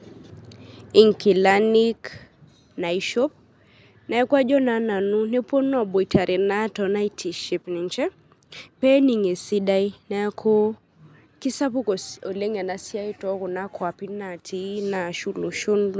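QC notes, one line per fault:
No faults are heard in this speech clip. The call microphone processing shows as a trimmed lowest bass and no content above 8 kHz, both normal for that path.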